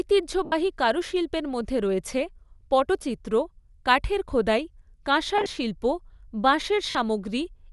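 Throughout the speech, the audio has likely passed through Bluetooth LC3 compression, whose 10 ms transform frames at a modest rate leave much of the upper band zeroed and noise-filled. That damage is plainly audible as a breathy, grainy edge on the voice.

Lost LE Audio frames then break the sound three times. From 0.45 to 0.52 s about 70 ms goes missing. From 5.38 to 5.46 s about 50 ms drops out in pieces, the longest run around 30 ms. From 6.90 to 6.95 s another 50 ms is lost. In each gap the decoder replays the previous spectrum with scrambled phase, so the speech smears into noisy hiss.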